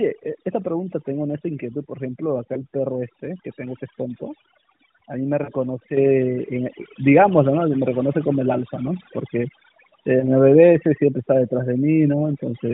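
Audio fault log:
Throughout: overdone noise removal. The background drops and breaks up into twinkling specks, with the voice's quieter edges and breathy detail missing. Noise reduction set too aggressively pulled individual frequency bands down or out whenever they came close to its noise estimate, and softer parts of the speech were removed along with the noise. The narrowband character of the mobile codec, with nothing above 4 kHz, sits underneath this and sounds only lightly coloured, consistent with a high AMR-NB mode.
2.54 to 2.64 s, 5.44 to 5.50 s and 10.20 to 10.29 s: lost AMR speech frames. Each is a brief dip or warble. The one at 5.44 s is a little longer and more smeared, and the voice comes back briefly weaker. Corrupted frames failed their check, so the decoder repeated the last good pitch and vocal tract settings at reduced gain. About 20 ms of audio was concealed at 2.54 s and 10.20 s and about 40 ms at 5.44 s, which fits one lost frame and then two.
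5.97 s: microphone volume stepped up. Voice and background jump up together by about 7 dB in a single step. The call software judged the microphone too quiet and raised the device's input level all at once rather than gradually. Because the change happens before any processing, everything captured from that moment on is louder, not just the voice.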